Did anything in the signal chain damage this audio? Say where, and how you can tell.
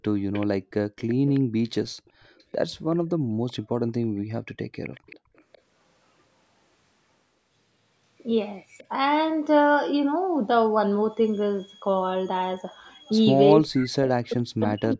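Yes. The damage happens at the call-processing stage. Three kinds of fault come from the echo canceller on a speakerphone.

Echo leak shows up four times: 0.33–1.4 s, 2.06–3.92 s, 4.83–5.58 s, and a tiny blip at 8.78–8.83 s. Each time a faint copy of the speech trails it by 383 ms. It sits about 20 dB down in the first and third stretches, about 25 dB down in the second, and very faint in the last. A loudspeaker feeding back into an open mic with incomplete cancellation is the likely cause. The fixed 383 ms delay is the giveaway.

Background gating by the echo canceller hits at 0.58–0.71 s, right inside that first echo stretch. The room sound suddenly drops, about 40 dB at its deepest, for around 150 ms, then snaps back. That's the canceller slamming the mic down while its loudspeaker was active and releasing once it judged things quiet again. It's a hard duck, not a natural fade.

Speech suppression in double talk runs from 13.56 s to the very end, about a second and a half. 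The speech gets pushed down by as much as about 40 dB. Most likely both ends were talking at once and the canceller couldn't tell its own talker from the echo, so it clamped down on everything. The loss is what points to double-talk suppression rather than a level change.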